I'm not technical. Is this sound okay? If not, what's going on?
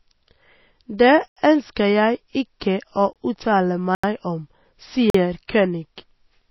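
No, this speech clip has a few problems.

The whole thing sounds dull and a bit watery, with nothing above about 5.8 kHz, so s sounds lose their crispness and get a swirly edge. That's most likely heavy MP3 compression squeezing the file too hard.

There are four blocks of digital silence, where the sound drops out completely and snaps back: 1.28 to 1.37 s and 3.95 to 4.04 s (both about 85 ms), 3.13 to 3.16 s, and 5.10 to 5.14 s. Usually that means the audio software didn't deliver its data in time.

At 2.60 s and 5.48 s you'll hear pre-echo, a short hiss for about 13 to 14 ms just before a sharp sound starts, which makes it feel soft and smeared. The compression leaks its noise into the quiet moment before a sudden attack.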